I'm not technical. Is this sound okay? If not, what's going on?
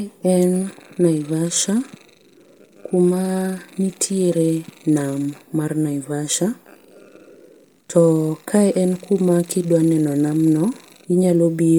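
No, not quite. The speech has an audible roughness from start to finish, likely from Bluetooth LC3 compression, the codec wireless earbuds and headsets use. It packs the sound into short slices of about 10 ms and saves space by throwing away fine detail in the brighter parts, then fills those gaps with a bit of noise. That's why the voice sounds plainly breathy and grainy, even though the range still reaches up to about 20 kHz.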